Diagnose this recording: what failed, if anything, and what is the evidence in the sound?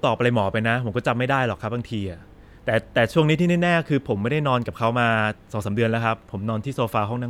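Nothing failed here: the speech comes through without a single audible fault, so there's nothing to pin on any stage of the chain.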